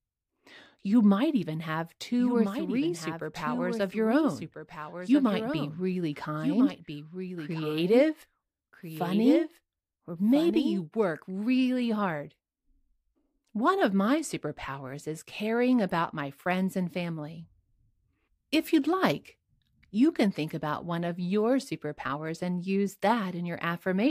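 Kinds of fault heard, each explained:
Doubled audio track: A second copy of the speech trails the first by about one and a half seconds, some 5 dB quieter. It is dry and full-band. It starts abruptly after "might even have" and stops before "work really hard".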